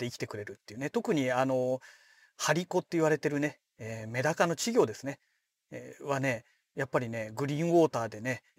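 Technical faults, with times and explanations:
Throughout, crude rate conversion: the speech carries a gritty, inharmonic fizz that rides on louder and brighter sounds, which fits a jump from 44.1 kHz to 48 kHz by simply repeating nearest samples without filtering. The uneven repeat pattern leaves shifted copies roughly 25 dB below the speech.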